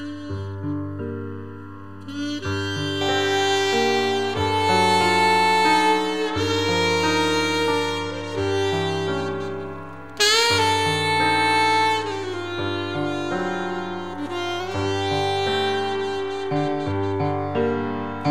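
From 0.0 to 3.01 s, channel delay (comb filtering): one channel lags by under a millisecond, so the mono sum has fixed notches starting near 700 Hz and sounds hollow, unlike a flanger's sweeping notches.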